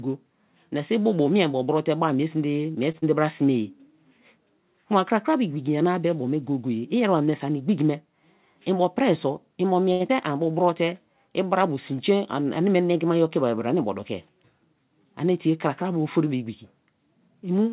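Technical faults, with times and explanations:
2.92 to 2.96 s, short stall from a late packet: a packet arrived late, so the receiver held the last sound about 19 ms, then resumed without losing anything.
2.98 to 3.04 s, short concealed packet loss: 40 ms never arrived; the receiver extended the preceding sound and blended back, giving a brief smear.
9.92 to 10.02 s, short stall from a late packet: a longer wait, about 77 ms of held sound, audible as a drawn-out moment before playback continues intact.
10.08 to 10.11 s, short concealed packet loss: 40 ms lost, only 12 ms filled in; the buffer dropped roughly 30 ms of delay, so a short piece vanishes.
10.52 to 10.83 s, jitter buffer slow-down: repeated pitch periods added 35 ms to rebuild the reserve, so the speech runs at 91% speed at unchanged pitch.
13.66 to 13.96 s and 17.28 to 17.65 s, jitter buffer speed-up: excess buffered audio was trimmed, roughly 40 ms and 50 ms, so speech runs at 112% and 111% speed, sounding hurried.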